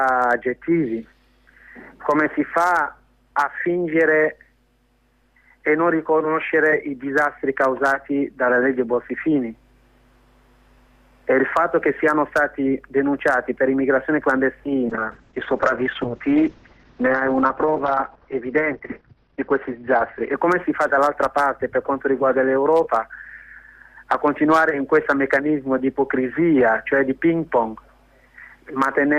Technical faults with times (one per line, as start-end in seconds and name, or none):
14.91-20.41 call bitrate drop